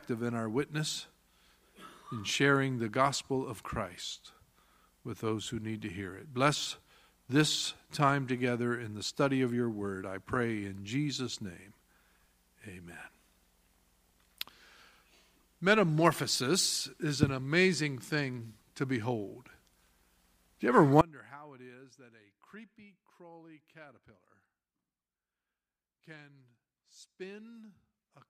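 At 21.01 s the wanted signal was likely lost upstream while the path after the break stayed live, giving an audio dropout to a faint residue. The sound cuts out abruptly rather than fading, and only a faint leak about 25 dB down remains to the end.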